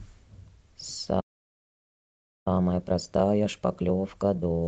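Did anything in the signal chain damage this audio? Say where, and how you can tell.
Yes. At playback, the speech drops to silence at 1.20 s and stays out until 2.48 s, about 1.26 s. That's likely a playback stall from a starved buffer.

Then comes time-compressed catch-up, from 2.48 s to the end. The player splices out small pieces and cross-fades them, so the speech hurries along at 1.5x with normal pitch.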